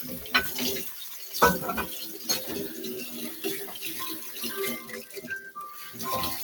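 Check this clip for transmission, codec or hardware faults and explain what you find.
Two faults come from a speech noise suppressor left running on these sounds. Nothing points to a codec or hardware fault.

A noise suppressor applied to music or sounds is active throughout. Reading steady sound and tails as noise, it turns them down while onsets pass, so level swings by around 10 dB. Unlike a compressor, it follows steadiness, not loudness.

Sound cut by the noise suppressor occurs at 0.92 to 1.34 s, dipping about 6 dB, and again at 5.03 to 5.19 s, about 5 dB. Sustained parts sink or their decays shorten while attacks mostly come through. The sound thins rather than going silent, as it would in a dropout.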